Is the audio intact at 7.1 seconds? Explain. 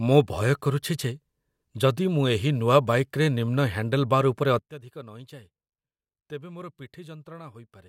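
No, a sudden gain jump at 4.59 s drops everything by about 18 dB to the end, likely an unramped gain change. Unlike a fade, noise floor falls instantly too.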